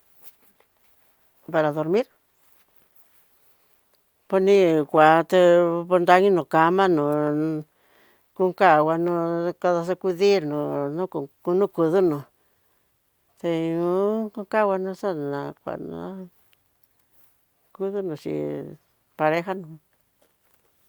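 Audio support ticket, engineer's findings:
No faults found on review of the speech recording; no dropouts, level anomalies or playback defects to attribute to any component, so nothing to escalate.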